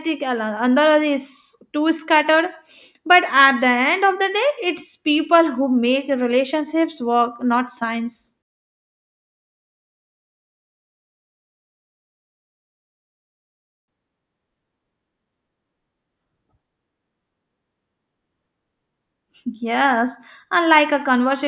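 No technical faults are audible.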